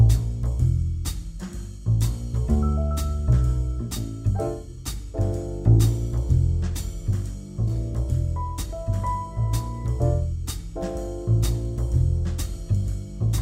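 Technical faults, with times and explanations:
7.67–7.70 s, stream segment skipped. The sound jumps abruptly forward, with a short blip at the join. Part of the programme is missing there. The likely cause is one stream segment failing to load, so the player carried straight on with the next.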